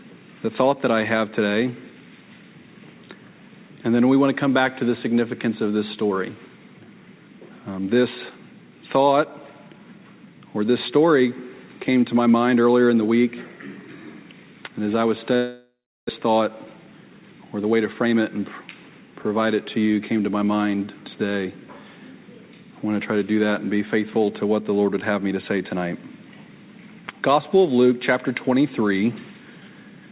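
At 15.36 s the sound breaks into a long network dropout, which is the likely cause of what follows up to 16.11 s. The last sound is stretched into a fading buzz or hiss, and about 0.35 s of near-silence follows before audio returns, with roughly 0.4 s of material gone for good. On a spectrogram, smeared, blurred harmonics dim into an empty band. The waveform's envelope tapers to a flat line.

From 16.19 s to 19.23 s a jitter buffer speed-up takes back the extra delay, about 0.3 s, that built up around the gap. The receiver repeatedly trims out pitch-period-sized slices, so the audio plays about 10% fast at unchanged pitch and sounds hurried. The waveform shows cycles of unchanged length and a compressed time axis, but harmonic spacing on the spectrogram stays put, still inside the call path's telephone band with nothing above 4 kHz.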